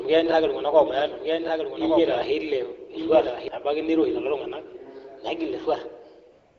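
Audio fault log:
0.00–3.48 s, doubled audio track: a second copy trails about a second behind at roughly 5 dB down, likely a slower capture path, and it drops out abruptly before "nabaiki niroshi".
6.31–6.59 s, AMR comfort noise: the phone stopped sending speech for about 282 ms, so a smooth synthetic hiss replaces the real background to the end.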